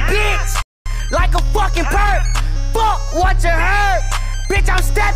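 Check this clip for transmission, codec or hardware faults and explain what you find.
Two related faults appear near the start: a playback stall followed by time-compressed catch-up.

From 0.62 to 0.86 s the sound cuts out mid-flow for about 235 ms, likely because the player's buffer ran dry or its thread was blocked. The waveform drops to a flat line, and the spectrogram shows a clean vertical gap across all frequencies.

From 0.86 to 2.42 s the player clears its backlog by cutting out and cross-fading short segments. Playback runs 1.15 times faster at unchanged pitch, so the sound feels hurried. The spectrogram shows events packed closer together, with small seams at the splices.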